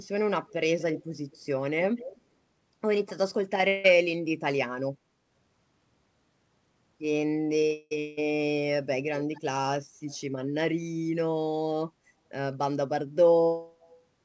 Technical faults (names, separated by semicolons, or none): echo leak; long network dropout; burst of packet loss